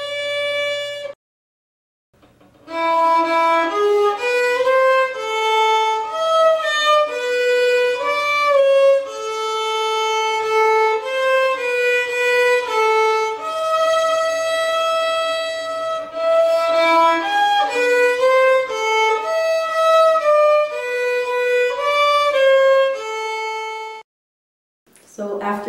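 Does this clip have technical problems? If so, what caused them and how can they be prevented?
No, the signal carries no technical faults that can be heard anywhere in the clip, so there is nothing here to trace to a cause or to prevent.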